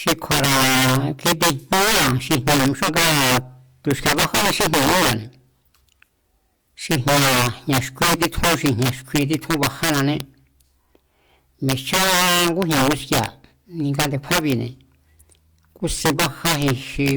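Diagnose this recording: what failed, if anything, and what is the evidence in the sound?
Integer overflow at the sample-format conversion stage runs through the whole speech clip. A gain about 10 dB too hot pushes the loudest peaks, roughly one sample in twenty, past the integer limit, and they wrap to the opposite sign. That gives violent cracks on loud syllables, far harsher than the flattened buzz of ordinary clipping.

A stream segment skipped at 2.84 to 2.89 s, where the speech jumps abruptly forward with a small blip instead of pausing or repeating. The likely cause is a segment that failed to load over the network, with playback carrying on from the next one. A buffer dropout would leave a silent gap instead.

A loud pop at 10.20 to 10.22 s, right after "jña̱ xkui títjún bajánané", is a single sharp transient, roughly 10 dB above the speech, with the speech continuing underneath. 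This points to a likely electrical step in the analogue wiring. Unlike the overflow cracks, it is isolated and unrelated to loudness.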